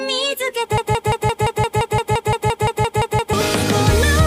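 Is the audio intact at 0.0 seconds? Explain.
Yes, the audio is intact at 0.0 seconds, with no fault present at that moment.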